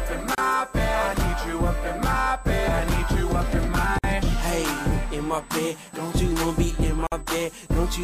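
From the start, a steady USB whine sits at a fixed 8 kHz, roughly 30 dB below the signal: bus microframe current leaking through power or ground, far higher than mains hum. Gaps at a join of encoded pieces open at 0.35 s for 30 ms, 3.99 s for 52 ms and 7.07 s for 51 ms. Separately encoded pieces were joined with their start delay and end padding left in. The sound resumes exactly where it stopped, unlike a dropout, which skips ahead.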